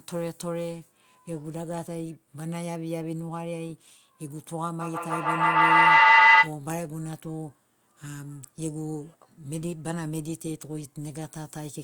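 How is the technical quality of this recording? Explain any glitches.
One fault stands out in this speech recording. From 4.81 to 6.57 s there is a feedback howl. A microphone picks up its own loudspeaker, and the loop gains level on each trip. It builds into a whine around 2 kHz, pulsing roughly every 150 ms and peaking about 16 dB above the speech.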